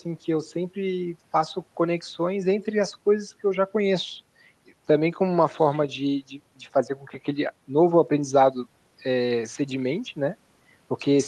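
No faults are audible in the speech; it carries the coding texture and the top-end roll-off near 12 kHz that point to a call path running an Opus-class codec at a moderate bitrate.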